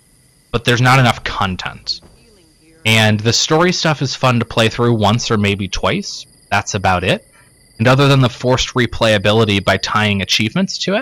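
Hard clipping runs throughout: the signal is driven about 15 dB past full scale, flattening about 3 percent of samples and adding harsh, buzzy fuzz on loud moments.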